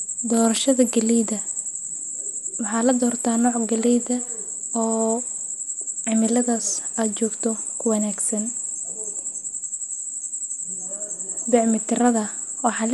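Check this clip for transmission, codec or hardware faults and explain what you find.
The speech shows one codec fault that runs throughout the clip. Generation loss, likely from repeated lossy encoding: the sound is swirly, hollow and smeared, with blurred consonant attacks and nothing above 11.9 kHz. The character fits an MP2-style codec at around 96 kbit/s, re-encoded about five times. Each pass quantises on a shifted frame grid, so noise and spectral holes accumulate. A single encode at that rate would sound cleaner.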